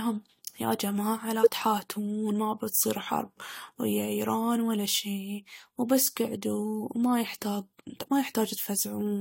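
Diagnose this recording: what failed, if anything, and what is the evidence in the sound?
The failure is at the codec stage: compressed frames skipped. At 1.43 to 1.47 s the speech jumps forward. About 20 ms of audio never plays. Frames were either missing from the stream or rejected by the decoder as corrupt.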